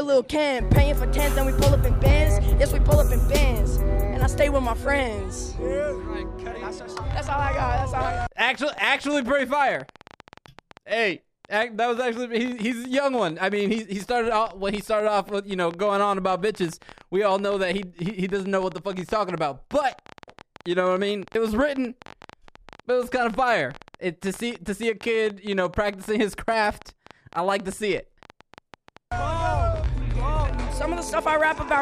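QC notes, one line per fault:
7.11–31.79 s, train of clicks: likely interference from nearby equipment or a faulty connection or power supply injects similar pulses 12.7 times a second at an uneven pace, so a few hundred pops tick over the sound and its pauses, peaking about 5 dB above it.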